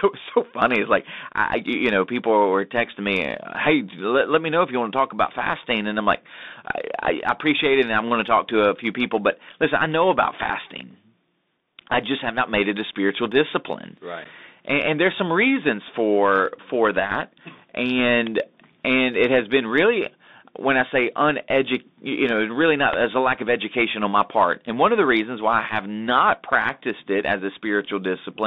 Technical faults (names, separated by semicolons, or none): Bluetooth CVSD headset codec; electrical switching spike; unconcealed Bluetooth headset packet loss